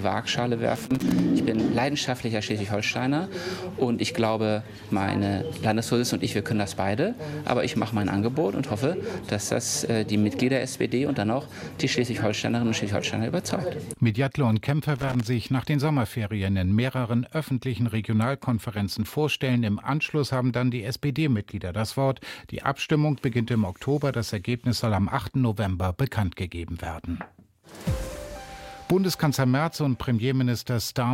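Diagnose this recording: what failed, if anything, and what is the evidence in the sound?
Loose connector crackle in the analogue wiring: irregular scratchy bursts at 0.75 to 1.20 s and 14.96 to 15.20 s, from a contact making and breaking. The randomness rules out regular digital clicks.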